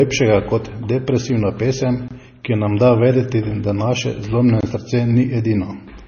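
From start to end the speech has a watery, swirling quality with heavy codec damage: weak detail flickers in and out, s sounds turn metallic and chirpy, and consonant attacks smear. The likely cause is MP3 compression at a low bitrate, with the sound pointing to roughly 24 kbps. On a spectrogram, energy stops sharply at 6.6 kHz across the whole clip, and below that the fine detail breaks into isolated blobs that switch on and off from frame to frame.

At 2.08 to 2.11 s, right after "kot depresivna pesem", there is a gap between chunks: the speech briefly drops out for 23 ms and then resumes with nothing missing. The same short hole recurs at 4.61 to 4.63 s, after "da vedeti da naše". The two gaps sit 2.5 s apart, which fits audio delivered in 2.5 s chunks with silence left at each join. On a waveform each one is a narrow flat notch, and on a spectrogram it is a thin vertical blank band through all frequencies.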